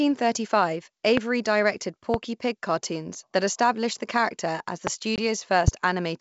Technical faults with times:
1.17-1.20 loud pop
2.14-2.17 loud pop
4.87-4.90 loud pop
5.16-5.21 packet loss on an ADPCM call
5.68-5.70 loud pop

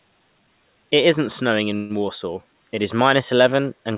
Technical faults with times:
1.76-1.93 call audio freeze

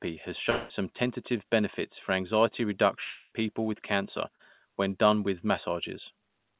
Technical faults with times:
0.50-0.72 long network dropout
3.04-3.33 long network dropout
4.35-4.41 short concealed packet loss

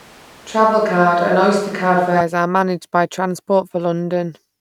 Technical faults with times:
0.00-2.21 switch to a distant microphone

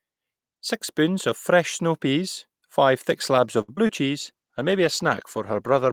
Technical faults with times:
3.61-3.70 short stall from a late packet
3.76-3.91 short concealed packet loss
4.21-5.92 call bitrate drop

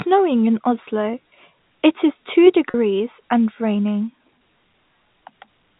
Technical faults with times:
2.70-2.74 packet loss with pitch repetition

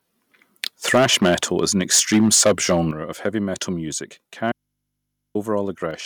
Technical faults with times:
0.63-0.67 microphone overload
0.94-2.80 microphone overload
0.95 microphone volume stepped down
2.91 microphone volume stepped down
3.25-3.27 microphone overload
3.93 microphone volume stepped down
4.52-5.35 audio dropout to a faint residue
5.91 microphone volume stepped down

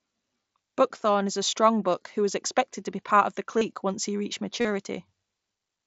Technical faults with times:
3.58-3.61 concealed Bluetooth headset packet loss
4.61-4.65 concealed Bluetooth headset packet loss

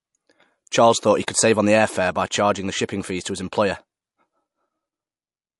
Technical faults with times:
0.00-5.60 low-bitrate audio saved at a high bitrate

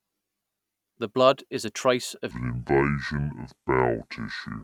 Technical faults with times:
2.31-4.63 section at the wrong speed

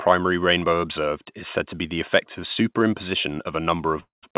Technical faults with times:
4.00-4.25 call audio freeze

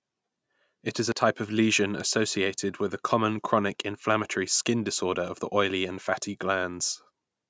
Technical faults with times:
1.12 dropped buffer (overrun)
5.28 dropped buffer (overrun)
6.04 dropped buffer (overrun)

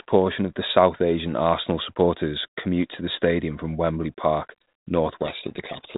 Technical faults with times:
5.22-5.97 codec payload misread

